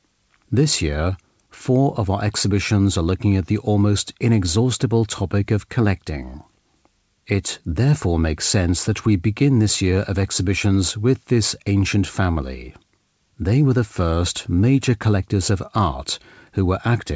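Nothing is technically wrong with the audio: it comes through a call path whose wideband coding fits a 64 kbps G.722 link, with nothing above 8 kHz.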